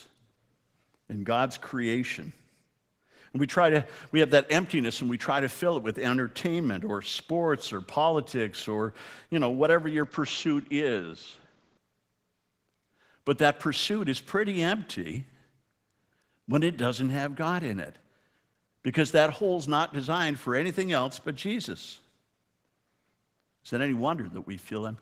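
From start to finish the speech carries Opus voice compression damage that is plainly audible. The band is not narrowed, which points to Opus in hybrid mode, where SILK codes the lower band and a CELT layer covers the range above 8 kHz. The excitation is coded coarsely, giving a hoarse, slightly robotic quality consistent with a bitrate around 16 kbps. The frames are 20 ms long.

From 10.04 s to 11.77 s, right after "you know whatever your", the sound turns duller and boxier. Nothing above about 7.6 kHz gets through, and a faint new noise floor sits well below the speech. The level stays about the same and there is no gap at either transition. This is most likely the input switched to a poorer device for those 1.7 seconds before the original microphone returns.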